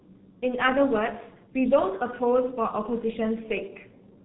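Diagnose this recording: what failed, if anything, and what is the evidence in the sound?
The codec stage failed: the speech has passed through G.723.1, and the damage is heavy from start to finish. Nothing reaches above 4 kHz, the voice sounds muffled and hoarse, and consonants smear together. The coarse, rough quality fits the 6.3 kbit/s mode, which models the voice only once per 30 ms frame. A plain band-limiting filter would dull the top end but keep the speech clean. Here, the grainy texture comes from the codec itself.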